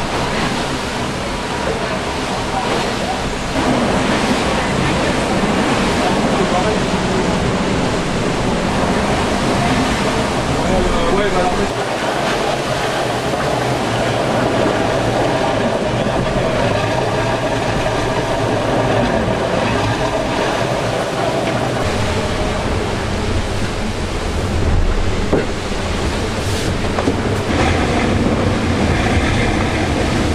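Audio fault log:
6.41–8.68 s and 24.50–26.05 s, drift correction step: sound slows by 6.5% and drops about 116 cents, slightly over a semitone, then snaps back, likely a clock-matching resampler stepping its rate. Speed and pitch move together in abrupt steps, unlike smooth wow.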